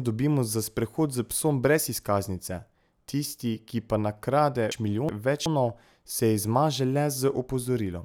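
From 4.72 to 5.46 s, just after "tisti ki pa nakrade", the speech has frames out of order: two adjacent blocks of about 0.37 s each were decoded in swapped sequence, a length that fits runs of four frames. The stretch plays with its second half first, giving a garbled, fluttering jumble. Unlike a dropout or a stutter, nothing goes missing or repeats, and the overall timing stays intact.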